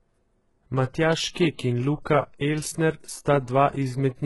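A speech clip with heavy coding damage throughout: the treble up to about 11.5 kHz sounds synthetic, with s sounds gritty and lispy, which points to HE-AAC compression, likely at a bitrate around 12 kbps. Unlike a plain low-pass or MP3, the top stays bright but is copied upward from lower bands.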